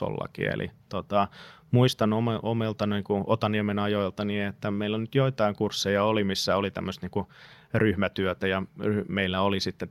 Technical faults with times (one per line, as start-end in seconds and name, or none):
none